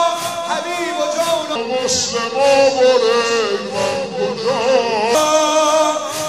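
From 1.56 s to 5.15 s there's a section at the wrong speed: it runs at about 0.76 times normal, so everything drops roughly five semitones and drags, deep and sluggish, then snaps back. That's likely playback or editing against the wrong clock.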